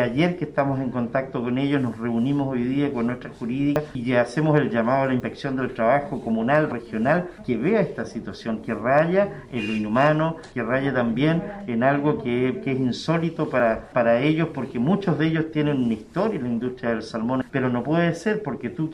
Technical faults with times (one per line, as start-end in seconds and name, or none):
3.76 dropped buffer (overrun)
5.20 dropped buffer (overrun)
6.72 dropped buffer (overrun)
13.60 dropped buffer (overrun)